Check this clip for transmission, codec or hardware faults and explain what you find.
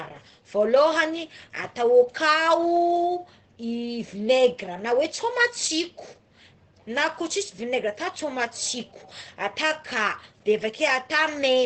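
One fault runs through the whole recording: Opus compression, likely at a bitrate low enough, around 12 kbps, to push the encoder into its SILK speech mode. That mode codes a narrowed, wideband signal, so nothing survives above 8.6 kHz, and heavy codec damage leaves the speech muffled and hoarse.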